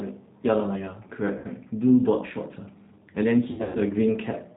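Throughout, the speech passes through the G.729 codec at 8 kbit/s. Its filter-and-pulse model rebuilds the voice with plainly audible roughness and a synthetic edge, with nothing above 4 kHz.

From 0.53 s to the end, sample clock jitter of under a microsecond moves sampling instants slightly, adding a faint hiss about 50 dB down that rises on louder, brighter sounds.

At 1.38 to 1.46 s, VoIP packet loss concealed by the speech codec drops about 60 ms of audio. The decoder extrapolates a fading stretch of buzzy tone or coloured noise from the last sound.

At 3.51 to 3.80 s, heavier losses totalling 180 ms, with one 120 ms run, leave a longer stretch of fading concealment and weak or distorted sound afterward.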